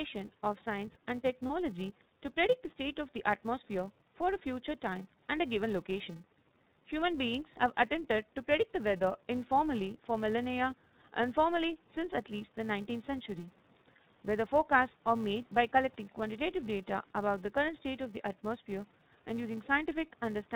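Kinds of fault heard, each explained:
iLBC codec: The speech passed through a narrowband VoIP codec that codes each 30 ms frame on its own, here at a rate fitting 13.33 kbps. Nothing above 4 kHz survives, and the voice comes across plainly rough and somewhat synthetic, with clear codec damage throughout.
Filter restarted on every block: A filter drops its state at every block boundary and begins each block from silence, which fits a 128-sample block. Each restart leaves a small transient, so a steady buzz near 345 Hz runs through the clip and rises and falls with the speech level.
Lost iLBC frames: One frame of about 30 ms went missing around 1.47 to 1.51 s, and the decoder filled it by repeating the last pitch cycle with some noise. That brief spot sounds like a held, faintly buzzy vowel, and normal speech returns almost immediately after.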